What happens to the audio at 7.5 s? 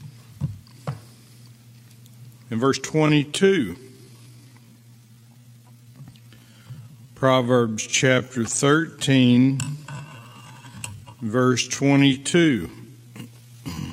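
At 7.5 s you're inside a time-stretched section that runs from about 2.79 s to the end. It's likely slowed to roughly 0.62× speed with pitch held, so it drags.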